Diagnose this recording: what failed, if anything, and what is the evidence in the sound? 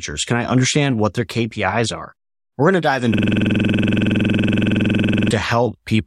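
The driver froze while the hardware kept replaying its buffer, a system hang loop. From 3.14 to 5.31 s one 46.44 ms slice repeats as a 21.5 Hz stutter, which fits a 2048-sample buffer.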